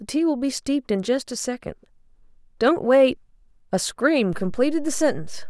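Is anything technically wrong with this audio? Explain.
Yes. At 4.33 s a low thump breaks into the speech, and from there to the end the sound continues unchanged over a shifted baseline. This is a DC step: the waveform's zero line jumps by about -28 dBFS and holds, as when a converter recalibrates.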